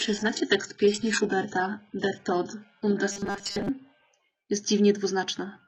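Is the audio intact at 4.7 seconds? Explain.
Yes, at 4.7 seconds the speech is intact, with no dropout, click, distortion or other fault audible at that moment.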